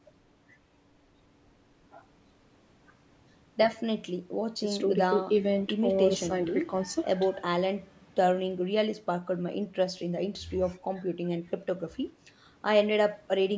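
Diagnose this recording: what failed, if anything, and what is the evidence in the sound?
Nothing failed: the speech shows only the expected marks of a call's microphone processing, with the lowest bass trimmed by its high-pass filter and no content above 8 kHz, and no stage introduces any audible defect.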